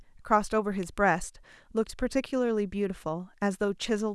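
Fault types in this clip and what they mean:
Electrical switching spike: at 0.83 s a single sharp snap, lasting only about 3 ms, sits on top of the speech without disturbing the speech itself. It peaks at about -30 dBFS, so it is a quiet, tight tick rather than a loud crack. The likely cause is a nearby switch, motor or static discharge arcing briefly, with the audio line picking up that burst of electrical noise and adding it directly to the recording.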